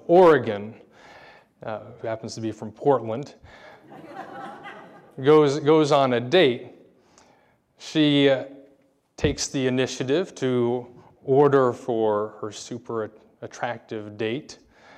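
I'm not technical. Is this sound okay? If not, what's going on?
Yes, the sound is okay. I can't hear any technical problem in it.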